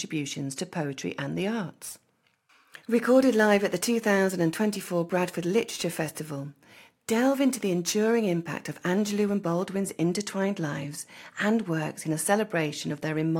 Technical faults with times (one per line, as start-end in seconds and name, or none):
1.63-9.63 crude rate conversion